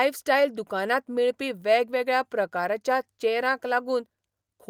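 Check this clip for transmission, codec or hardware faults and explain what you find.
Nothing faulty is audible anywhere in this speech recording.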